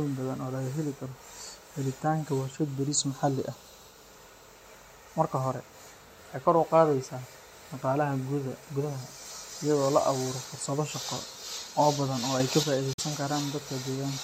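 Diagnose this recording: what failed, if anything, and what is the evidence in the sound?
At 12.4 s the level steps up by about 6 dB in a single instant, background noise and all, and holds until 12.63 s. That points to a sudden gain jump, likely a gain setting or bit shift applied in the driver or processing stage without any ramp.

Then at 12.93 s the sound cuts out cleanly and comes back at 13.0 s, picking up as though it had kept playing underneath. That's likely a Bluetooth dropout on the wireless link, with packets arriving too late and being discarded. The gap fits about two lost frames, roughly 46 ms.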